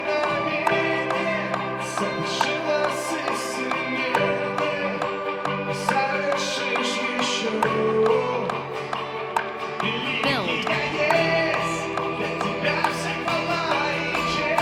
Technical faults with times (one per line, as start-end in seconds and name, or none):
none